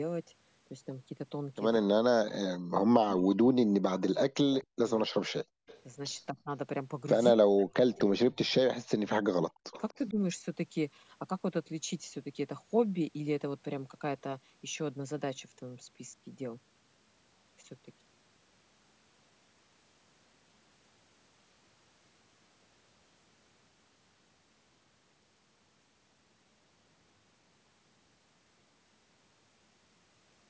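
From 1.89 to 5.17 s the speech repeatedly sinks, by roughly 40 dB at its deepest, for about two seconds in total. This is speech suppressed in double talk: the dips are likely the echo canceller turning the near voice down while the far side was also talking. Unlike a network dropout, the audio is pulled down rather than lost. The same pattern returns at 6.3 to 6.51 s, shallower at about 15 dB, and again from 7.36 to 10.15 s, reaching about 40 dB down across roughly 1.5 s.

Inside those stretches, at 4.53 to 4.9 s and 9.72 to 9.94 s, and again at 5.67 to 5.8 s, a faint copy of the voice trails the original by 243 ms, about 20 to 25 dB below the speech. This echo leak is likely loudspeaker sound that the far end's canceller failed to remove and sent back. The fixed 243 ms lag and the weak, scrappy level set it apart from room reverberation, which smears continuously rather than repeating at one delay.

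Between 5.45 and 5.66 s the room tone itself drops by about 33 dB for around 200 ms and then comes back. That is background gated by the echo canceller, which clamped the microphone while the loudspeaker played. Because the gap sits in the background and it returns cleanly, it reads as gating, not as double-talk suppression. The call path's band limit, with nothing above 8 kHz, is ordinary microphone processing.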